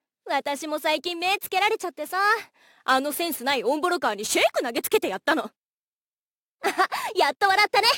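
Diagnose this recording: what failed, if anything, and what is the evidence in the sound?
Crude rate conversion failed at the sample-format conversion stage. A gritty, inharmonic fizz runs through the whole clip and rides on loud, bright passages. It fits a 44.1 kHz to 48 kHz change by repeating nearest samples, unfiltered. The error tones sit roughly 20 dB below the sound.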